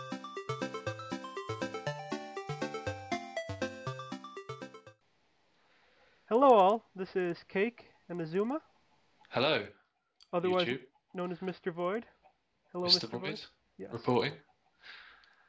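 From start to finish, a steady 20 Hz tick, almost a buzz, sits under the sound: the resampler was restarted on every block, with each 50 ms block converted in isolation, likely from 48 kHz to 16 kHz. Unlike buffer underruns, nothing drops out, and the ticks vanish wherever the sound falls silent.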